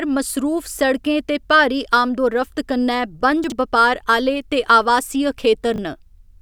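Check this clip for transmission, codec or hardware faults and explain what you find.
Two moments of chunks out of order occur in this speech, at 3.44 to 3.52 s and at 5.74 to 5.78 s. A 20 ms chunk arrived late and was played three chunks, then one chunk, after its proper place. The reordered sound jumbles briefly across the hard joins.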